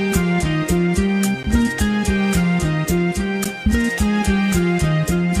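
At 1.43 s and again at 3.44 s, the sound drops out for about 13 ms. Each hole is a gap between chunks. The audio arrives in 2.0 s blocks, and silence sits at the joins. Nothing is lost, but each join is a brief break.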